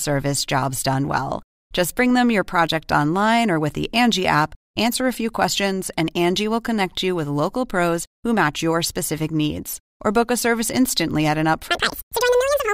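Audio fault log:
11.70–12.73 s, section at the wrong speed: after "service instantly at an", the final second was likely played against the wrong clock, running at 2.0 times its recorded speed, so the speech rushes by and pitch jumps up around ten semitones, thin and chipmunk-like.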